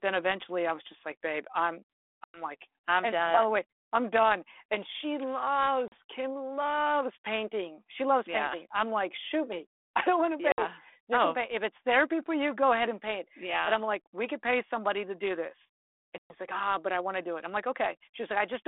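Hard-edged holes of silence cut the speech at 2.24 s (about 100 ms), 5.88 s (about 40 ms), 10.52 s (about 60 ms) and 16.18 s (about 120 ms, the longest, a handful of packets). Each time the sound returns slightly distorted before settling. This is packet loss on an ADPCM call. The missing packets were filled with silence, so the decoder's adaptive predictor and step size drifted from the sender's and needed tens of milliseconds to lock back on. The narrow 300 Hz to 3.5 kHz band and light coding damage fit a 32 kbit/s G.726 line.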